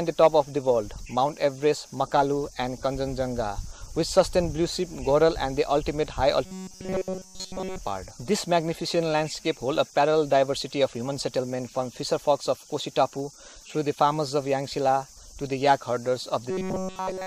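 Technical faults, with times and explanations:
0.22–0.27 s and 4.19 s, hard clipping: the signal overran what a stage in the chain could pass, by about 4 dB in the first burst and about 3 dB in the second, so peaks were cut flat. Those squared tops add high harmonics, heard as brief crackle on the loudest moments.
6.45–7.79 s and 16.51 s to the end, robotic sound from repeated short buffers: new audio likely stopped arriving in time, so playback looped a fragment of about 5 ms across the whole stretch. The looping stamps a fixed 188 Hz buzz onto the sound, rigid and metallic.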